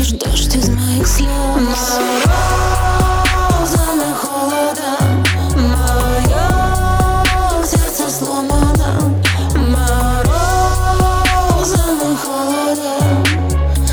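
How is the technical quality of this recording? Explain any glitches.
The technical quality of the recording is good, with no glitches to explain.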